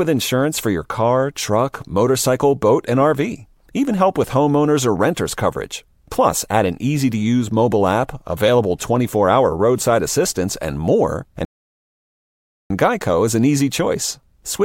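At 11.45 s the player's buffer ran dry, a rebuffering stall: the speech drops to silence for 1.25 s, then resumes exactly where it stopped, nothing missing.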